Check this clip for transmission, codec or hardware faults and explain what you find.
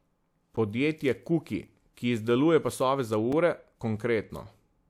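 Three blocks of digital silence interrupt the speech: at 0.56 s (10 ms), 1.68 s (5 ms, just before "ki izdeluje pasove za") and 3.32 s (5 ms, just after "ki izdeluje pasove za"). Each is a block of silence, as happens when the output buffer goes unfilled in time. The signal cuts out abruptly to silence and back, and each gap sounds like a brief tick.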